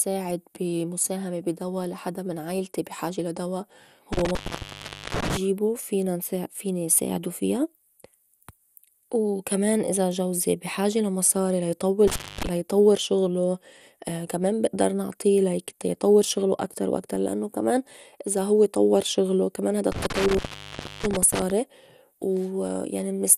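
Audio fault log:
throughout: MP2 compression. The speech has a dull, gurgling, granular quality, plainly audible, and nothing reaches above 15.1 kHz. This is likely the work of an MPEG Layer II encoder at a low rate, which fits around 80 kbps. Short of bits, the encoder shuts off upper sub-bands and coarsely quantises the rest. On a spectrogram the top ends flat at 15.1 kHz, with blocky patches flickering on and off in the upper bands.
4.13–5.37 s, 12.08–12.47 s, 19.92–21.50 s: intermittent contact. Three times the speech cuts out as a loose connection opens, for about 0.79 s, 0.26 s and 0.65 s respectively, with crackle as the contact breaks and remakes and faint hiss left in the gap. On the waveform each appears as a sudden collapse to a thin noise floor, bracketed by sharp spiky clicks. A spectrogram shows these clicks as vertical broadband streaks around a near-empty band.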